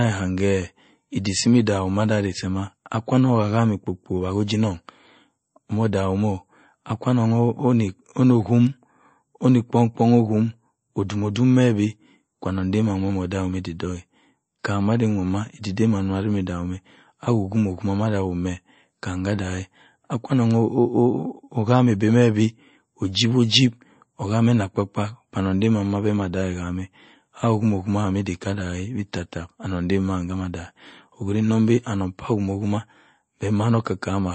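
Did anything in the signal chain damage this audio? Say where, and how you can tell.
Yes. Throughout the speech the treble stops dead at about 8.3 kHz, so sibilants sound dull and clipped, and the sound has a watery, swirling texture that is plainly audible. The damage likely happened at the codec stage, as MP3 compression. Short of bits, the encoder cut everything above a fixed frequency and zeroed weak spectral lines, which flicker on and off from frame to frame. That behaviour fits a low bitrate around 32 kbps.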